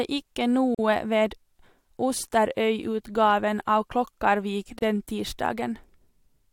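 Brief silences cut into the speech at 0.75 to 0.79 s and 4.79 to 4.82 s, about 42 and 32 ms, four seconds apart: gaps at joins of encoded pieces, where untrimmed encoder delay and padding remain.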